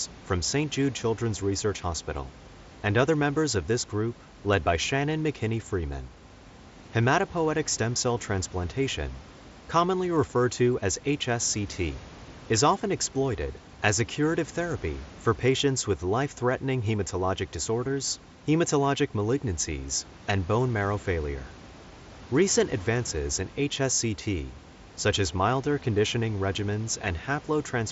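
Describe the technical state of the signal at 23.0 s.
At 23.0 s the speech signal is intact, with no fault present, only the room noise sitting well beneath the voice and the light graininess and 8 kHz bandwidth of the mSBC Bluetooth headset link.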